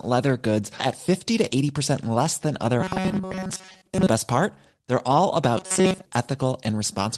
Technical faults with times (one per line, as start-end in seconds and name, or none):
0.79-0.81 skip ahead
1.39-1.80 jitter buffer speed-up
2.81-4.08 robotic sound from repeated short buffers
5.58-6.06 robotic sound from repeated short buffers